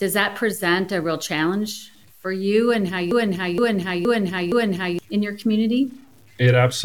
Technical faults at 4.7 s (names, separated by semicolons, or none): low bit depth without dither; broken-record loop